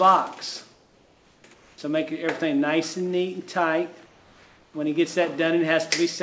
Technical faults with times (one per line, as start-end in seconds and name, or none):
0.74-1.78 comfort noise in place of the background
4.06-4.74 comfort noise in place of the background